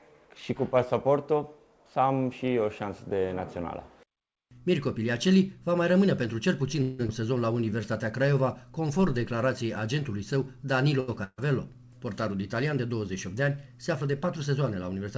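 Call audio heard through a band-limited codec, with nothing above 8 kHz, which fits a G.722 stream at 64 kbps. From 6.82 to 7.01 s there is a call audio freeze. The last sound is drawn out as a fading buzz or hiss for about 169 ms. Then the audio carries on from the same point, so nothing is lost. The likely cause is packets held up in transit, which left the jitter buffer empty. Delay grows by the length of that gap. Right after it, at 7.07 to 7.10 s, comes a skip ahead. Playback jumps forward, and about 150 ms of audio is gone. Only a tiny 13 ms patch bridges the join. Audio that was already waiting was dropped, in transit or by the overfull jitter buffer, which wins back roughly the delay the freeze added. Two stretches of jitter buffer slow-down follow. From 7.53 to 7.82 s the audio plays at 84% speed, with 54 ms added. From 8.22 to 9.36 s it plays at 93% speed, with 84 ms added. The pitch stays the same, but sounds are drawn out. 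The receiver repeats single pitch periods again and again to rebuild a reserve in a buffer running low. At 11.00 to 11.10 s there is a short stall from a late packet. One sound is held about 78 ms too long, with a slight buzz or dip. No packet was ready when it was due, so the receiver stretched the last sound until it came. The audio then resumes with nothing missing. Soon after, from 11.24 to 11.40 s, a burst of packet loss strikes. About 140 ms of audio is lost. The receiver continues the previous sound and turns it down, ending in about 40 ms of silence. Playback picks up further on, with the lost part simply absent. Finally, from 14.02 to 14.58 s, there is a jitter buffer speed-up. The audio runs at 107% speed at unchanged pitch and sounds hurried. Roughly 50 ms is cut out in short pitch-period pieces. The receiver trims audio like this when its buffer holds more than it targets, to bring the delay back down.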